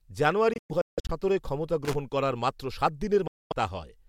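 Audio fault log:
0.53–1.11 s: Bluetooth dropout, scattered gaps totalling about 370 ms, longest near 160 ms; packets likely arrived late and were discarded, so sound cuts out and resumes further on.
1.85–1.95 s: loose connector crackle just before "করার মাত্র", a worn contact making and breaking, chopping the signal into a brief irregular scratchy burst.
3.27–3.53 s: Bluetooth dropout, about 230 ms of silence; likely late packets dropped, and the audio picks up as though it had kept playing.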